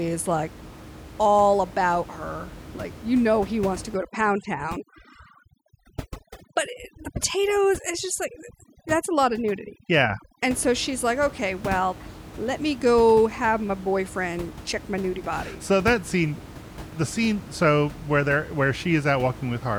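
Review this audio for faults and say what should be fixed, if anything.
From 3.96 to 10.48 s there's overdone noise removal: the reducer hacks out bands near its noise estimate, so the gaps twinkle. Back off the reduction strength, since the room noise, sitting about 16 dB under the speech, doesn't need that much.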